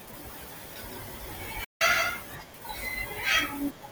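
From 0.31 to 2.23 s the speech has a flat, uncoloured echo about 150 ms behind, about 5 dB quieter: a doubled audio track, likely from a slower second capture path. At 1.64 s a digital broadcast dropout mutes the sound with an 8 ms fade for 160 ms, likely about five lost frames, before it returns at 1.82 s.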